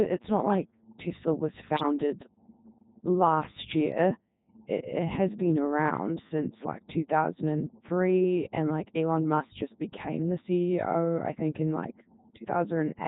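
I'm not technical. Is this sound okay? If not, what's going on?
No. Three separate problems can be heard.

Mains hum runs under the whole recording: a steady, low 60 Hz drone, loud enough to notice easily. It comes from the electrical supply leaking into the recording, often through a grounding problem or a nearby transformer. Unlike rumble from wind or traffic, it never changes. It stays at one fixed low pitch from start to finish, even when nobody is talking.

The Codec 2 vocoder is why the speech sounds robotic and buzzy all the way through. This kind of digital radio system doesn't send the actual sound. It sends a rough description of the voice: how high, how loud, and what tone. The receiver then rebuilds a synthetic voice from that description. Here the damage is heavy. This differs from ordinary poor phone quality, which sounds muffled or thin. This sounds artificial, like a machine imitating a person.

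Bit errors on digital voice radio cause a brief glitch from about 1.77 to 1.83 s. Garbled data reached that low-rate voice system. Because each piece of data controls the pitch or loudness of a whole stretch of sound, the voice briefly jumps into a warbling, bleeping burst. A simple dropout would go silent or click. This instead produces strange synthetic noises for a moment.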